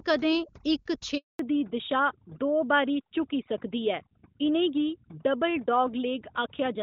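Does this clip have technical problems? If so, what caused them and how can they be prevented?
Yes. Throughout the speech, the background drops and breaks up into twinkling specks. This is overdone noise removal: a suppressor set too strongly shuts off individual frequency bands near its noise estimate, taking quiet speech detail with them. Setting noise reduction more gently, or cleaning up the source recording, prevents it.

From 1.17 to 1.39 s the voice fades out within a few tens of milliseconds and stays silent for 220 ms, and whatever was said in that span is lost. This is a handover gap: while the call switched networks, no speech frames arrived until the new link came up. Network settings that keep the old link alive until the new one is carrying audio prevent it.

From 1.39 s to the end, the voice becomes duller and rougher, with nothing above 4 kHz. The band limit points to a fallback to narrowband, likely a drop from AMR-WB HD Voice to the older AMR-NB codec right after the handover. 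Keeping HD Voice support consistent on both networks prevents it.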